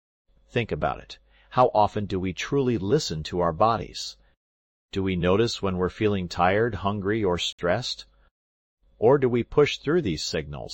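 At 7.53 s, the time stamps of two consecutive stream segments, which fit a 4-second segment length, fail to meet, leaving a gap between stream segments that the player fills with silence. The sound drops out for about 61 ms with abrupt edges, then resumes with nothing missing.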